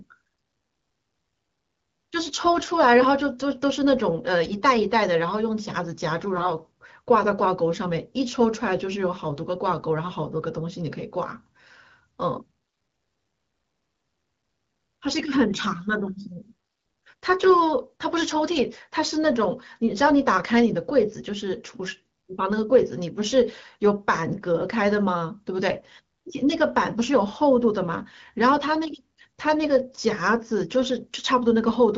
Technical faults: AMR bit errors

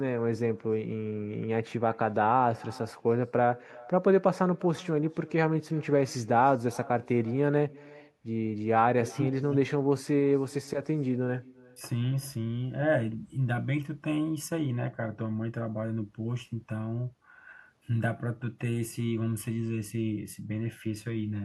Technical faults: echo with no canceller

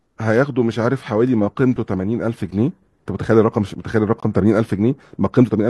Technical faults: gap between stream segments

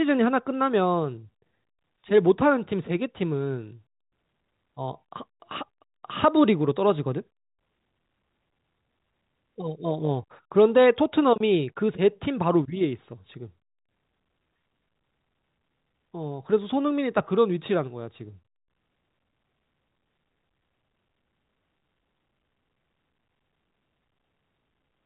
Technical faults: none

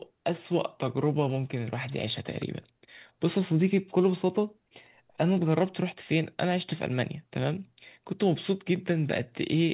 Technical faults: none

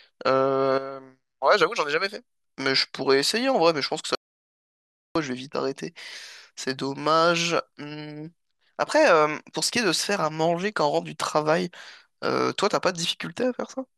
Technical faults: audio dropout to silence

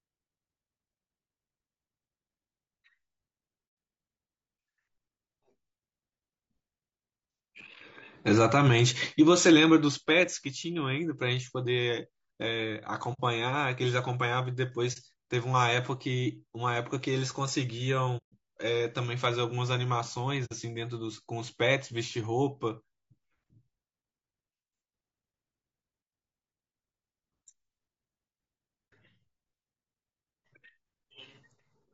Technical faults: low-delay AAC compression; AAC frame loss with muting

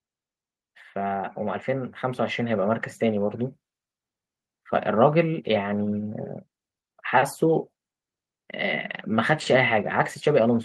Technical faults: automatic gain rising

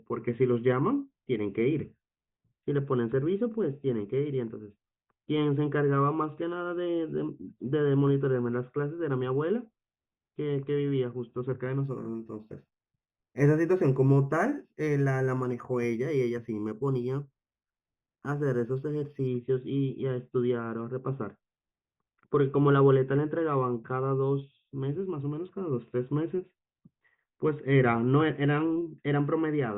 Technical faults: imaging from linear upsampling

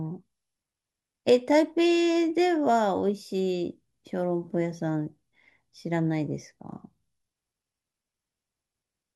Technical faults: none

